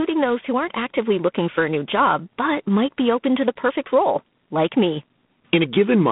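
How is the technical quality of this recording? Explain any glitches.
Quality's fairly rough: there's one fault and it runs the whole way through. The speech has G.726 ADPCM coding damage, with each sample stored as a few bits of difference from a prediction. That leaves a harsh, rasping hiss riding on the speech's level, which fits about 24 kbit/s. The band is squeezed to roughly 150 Hz to 3.6 kHz, and nothing comes through above 3.8 kHz.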